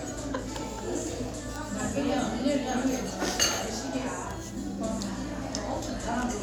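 Nothing goes wrong anywhere in these sounds, so there's really nothing here to flag.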